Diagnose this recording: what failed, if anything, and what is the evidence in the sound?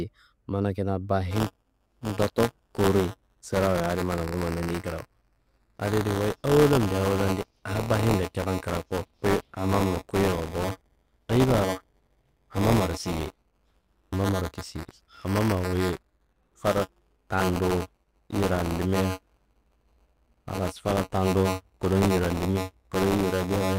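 The fault sits at the driver/buffer stage: buffer tearing. From 1.31 s, right after "mana kina", to the end, the speech carries a steady robotic buzz at 188 Hz, present only while there is signal. That rate fits a 256-sample buffer. Writer and reader pointers cross inside each period, so about a tenth of every buffer replays audio from around 15 ms earlier, joined hard on both sides. The spectrogram shows vertical striations every 5.3 ms and a 188 Hz comb. The waveform shows matching step discontinuities.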